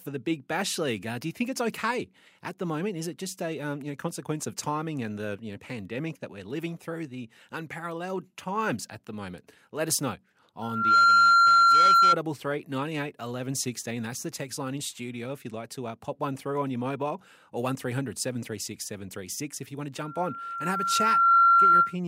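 Loudspeaker feedback squeal at 10.62–12.17 s and again at 19.98–21.96 s: the microphone picks up its own loudspeaker, and at 1.4 kHz the loop gain exceeds one. A pure tone swells over the speech, quickly the first time and more gradually the second, until it sits about 15 dB above it.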